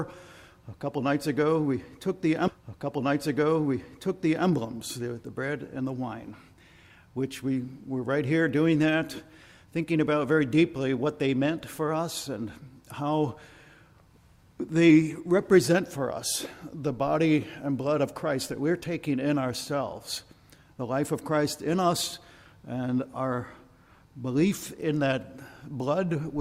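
At 2.47 s a stream segment is repeated. The player queued the same chunk twice, so the two seconds up to 4.47 s play again after a small blip at the jump back. Unlike a buffer stutter's rapid tiny loops, this replay is long and recognisable.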